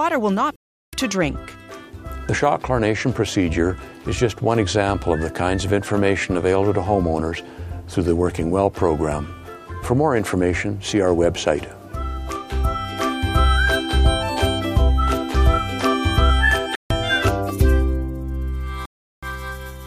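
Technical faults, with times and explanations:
0.56–0.93 s, 16.75–16.90 s and 18.86–19.23 s, block of digital silence: the audio drops abruptly to silence and returns with no fade. The 0.37 s holes fit a 16384-sample buffer left unfilled in time. The middle hole lasts 0.15 s.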